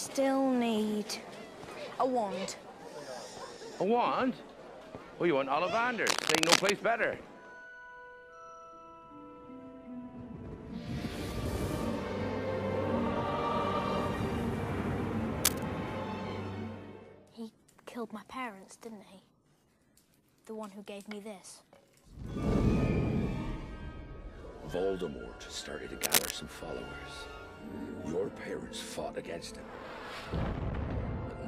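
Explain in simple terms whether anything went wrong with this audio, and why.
Three short bursts of cable scratch noise cut in, from 6.04 to 6.71 s, from 15.44 to 15.63 s, and from 26.03 to 26.31 s. Each is a rough, crackly rustle that briefly sits on top of everything, a bit louder than the sound itself. It's likely a worn cable, plug or knob being nudged, so the electrical contact flickers and spits noise into the signal for a moment.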